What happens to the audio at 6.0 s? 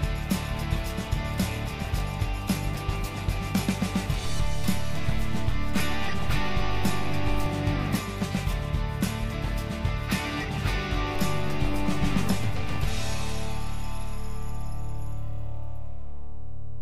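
At 6.0 s the audio sits inside a DC step running from 4.26 s to 7.46 s. The waveform's zero line is displaced by about -24 dBFS and held there, with a low thump where it steps at 4.26 s and again at 7.46 s, while the sound continues unchanged.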